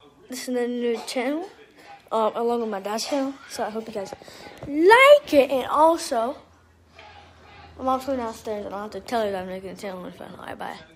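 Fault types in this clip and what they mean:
No faults turn up anywhere in this one, so there's nothing to list.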